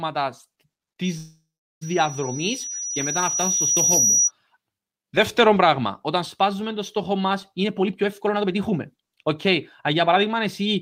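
Loudspeaker feedback squeal runs from 1.04 to 4.32 s. The microphone hears its own loudspeaker, and at 5.8 kHz the loop gain tops one. That tone swells over about two seconds into a piercing whistle around 5 dB louder than the speech.

Call audio freeze starts at 1.17 s, inside the squeal, and lasts until 1.83 s. The last sound is stretched into a fading buzz and then goes silent for 0.39 s before the speech resumes where it stopped. The likely cause is delayed packets draining the jitter buffer. Nothing is lost, but the playback now lags 0.64 s.

Jitter buffer speed-up runs from 7.64 to 9.49 s at 126% speed, shedding about half a second. It returns from 9.93 to 10.76 s at 107%, trimming a further small amount. The receiver cuts out short pitch-period slices to shrink the surplus delay, so the speech sounds rushed at unchanged pitch.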